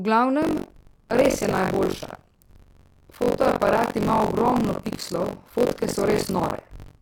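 From 0.41 s onward, buffer tearing puts a robotic 46.9 Hz buzz under the speech, which fits a 1024-sample buffer. About a third of each buffer replays audio some 70 ms old, so the waveform shows hard joins and the spectrogram regular vertical stripes.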